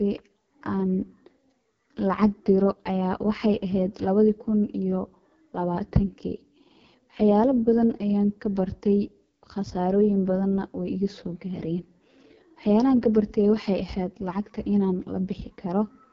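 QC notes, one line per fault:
Throughout: AMR wideband (HD Voice) codec. The speech sounds rough and raspy, with a hissy, synthetic top end, and nothing is heard above about 7.5 kHz. The heavy damage points to AMR-WB running at one of its lowest rates, around 6.6 kbit/s. At that rate the pulse-driven vocal tract model has too few bits to follow the speech below 6.4 kHz accurately, and the band from 6.4 to 7 kHz is filled with shaped noise instead of real detail.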